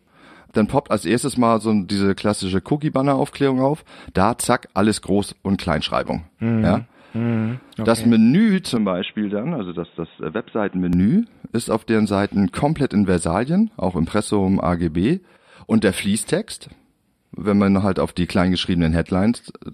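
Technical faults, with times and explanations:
8.77–10.93 s, input switched to a poorer device: the speech abruptly turns dull and boxy, with nothing above 3.8 kHz, drops by about 5 dB and gains a noise floor roughly 35 dB down. This is likely a change of microphone. On a spectrogram the upper band vanishes at a hard vertical edge, and the waveform shrinks.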